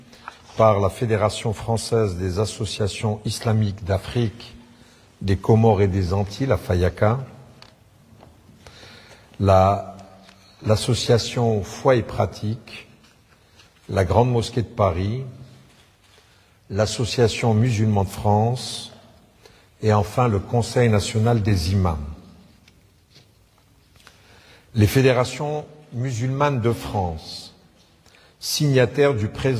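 Nothing technically wrong can be heard anywhere in the audio.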